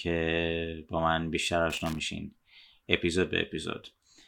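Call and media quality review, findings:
Loose connector crackle, 1.70–2.00 s, speech: irregular scratchy burst lasting about 0.3 s. Probable component: worn or dirty plug or jack contact. Signal chopped as contact makes and breaks; DC steps add pops. Waveform: ragged dropouts, spikes. Spectrogram: scattered broadband vertical streaks.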